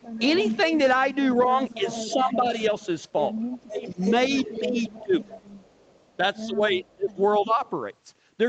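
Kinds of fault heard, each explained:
Echo leak: A delayed copy of the speech, about 236 ms late, comes back likely through a loudspeaker the echo canceller failed to clean. It is loudest early, fading later.
Speech suppressed in double talk: The main speech likely gets turned down while the other side talks. Dips reach about 30 dB.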